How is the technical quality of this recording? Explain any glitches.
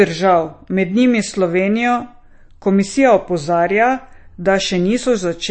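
The quality is compromised by plainly audible lossy coding throughout the speech. MP3 compression, likely the cause, leaves a watery, swirly texture with nothing above 8.3 kHz, which fits a bitrate near 33 kbps. A spectrogram shows a hard ceiling and flickering gaps where starved bands drop out.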